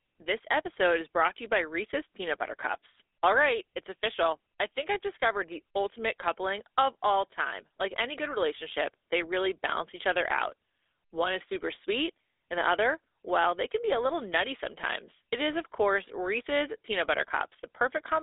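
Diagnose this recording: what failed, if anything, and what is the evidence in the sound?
Throughout the speech there is a buzzy, gravelly roughness, plainly audible, on a narrow line band of about 300 Hz to 3.6 kHz, with nothing above 3.8 kHz. This points to the GSM full-rate codec, around 13 kbps, at the codec stage: it models the vocal tract and excites it with sparse, regularly spaced pulses, which produces the grain.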